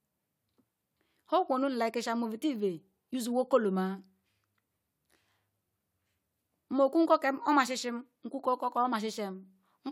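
No technical faults can be heard anywhere in the recording, and the signal holds steady throughout.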